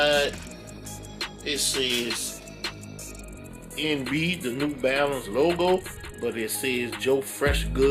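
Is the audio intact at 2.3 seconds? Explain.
Yes, at 2.3 seconds the audio plays through cleanly, with no dropout, click, distortion or other fault at that point.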